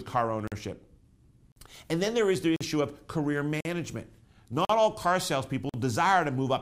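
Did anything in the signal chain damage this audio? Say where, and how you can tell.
Yes. A gap between chunks: the audio was handled in 1-second chunks, and playback or storage left 44 ms of silence at each join. Hard-edged holes fall at 0.47, 1.52, 2.56 (after "then there is the"), 3.61, 4.65 and 5.69 s, interrupting the speech at a steady interval.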